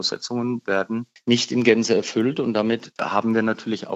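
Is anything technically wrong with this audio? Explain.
Yes. A single loud pop occurs at 2.99 to 3.01 s. The likely cause is an abrupt voltage step or pulse, such as from a switch, a plug, static discharge or a driver glitch, entering the signal path, where the following circuitry shapes it into a brief transient. It is heard as one sharp pop, peaking roughly 10 dB above the surrounding level, laid on top of the sound, which continues underneath without interruption.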